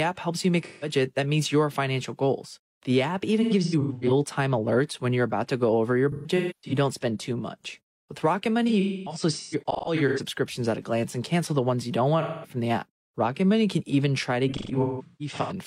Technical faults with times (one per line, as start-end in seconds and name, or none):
0.64-0.89 AAC frame loss with concealment
3.42-4.12 AAC frame loss with concealment
6.12-6.72 AAC frame loss with concealment
8.67-10.20 AAC frame loss with concealment
12.21-12.53 AAC frame loss with concealment
14.48-15.53 AAC frame loss with concealment